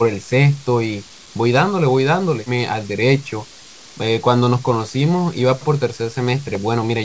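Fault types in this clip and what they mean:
Speech suppressed in double talk: at 3.22 to 3.74 s the speech sinks about 10 dB, a partial dip rather than silence, likely from an echo canceller ducking overlapping talk.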